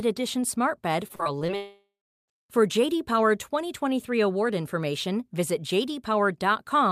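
From 1.07 to 1.5 s the speech turns choppy, with small pieces chipped out. This is repeated packet loss (robotic sound): five separate holes, the longest about 38 ms, were patched by stretching the preceding sound, covering roughly a quarter of that stretch.

Right after, from 1.56 to 2.30 s, the sound smears into a fading buzz or hiss and then goes silent for about 400 ms before the speech resumes with roughly 720 ms missing. The likely cause is a long network dropout, where the receiver extended the last audio until nothing was left to extend.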